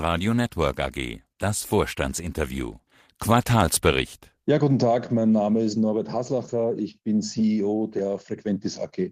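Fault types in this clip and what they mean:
No technical faults can be heard anywhere in the speech, and the signal stays continuous throughout.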